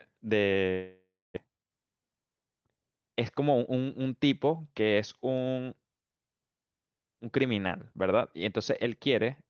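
A speech clip carried over a call path with an Opus-style codec, its highs cut off at about 8 kHz. From 0.71 to 1.38 s there is a gap that is likely a long network dropout. The last sound is stretched into a fading buzz, then about 0.28 s of near silence follows. Speech resumes with roughly 0.4 s of it simply gone. That sudden hole points to audio that never arrived. Then, from 1.47 to 3.14 s, comes a jitter buffer speed-up. The speech runs about 14 percent fast but keeps its pitch, so it sounds hurried. This happens when delayed audio arrives in a burst and the receiver catches up by snipping tiny pitch-period slices, over and over. Here that trims around a fifth of a second of built-up delay.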